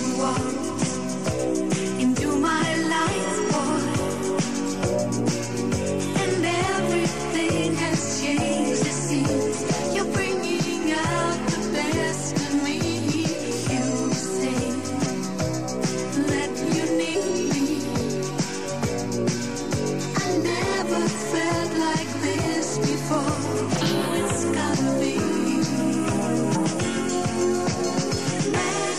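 At 15.05, 17.14 and 26.54 s, compressed frames are skipped. Whole decoded frames go missing, so the sound leaps ahead by roughly 70, 100 and 150 ms, which fits a few 23.2 ms frames each. Each join is a brief smeared blip. On a spectrogram it is a thin vertical smudge, and on the waveform a sudden jump in shape.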